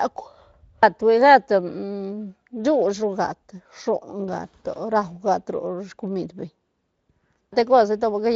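Speech recording, no technical faults to report; the Speex coding path is working as intended.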